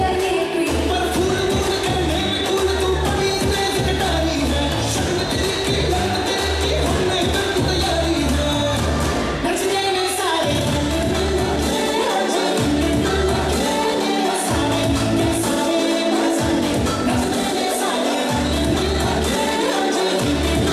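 No technical faults can be heard anywhere in the recording; the signal stays continuous and steady throughout.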